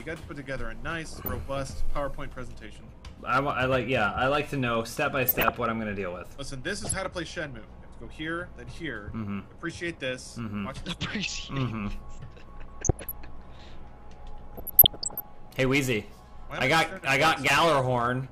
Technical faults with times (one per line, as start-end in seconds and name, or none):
1.12-1.28 DAB burbling
5.16-5.50 DAB burbling
6.85-7.14 DAB burbling
12.49-13.11 DAB burbling
14.46-15.25 DAB burbling
17.22-17.53 DAB burbling